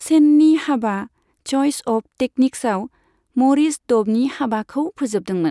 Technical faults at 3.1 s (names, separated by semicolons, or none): none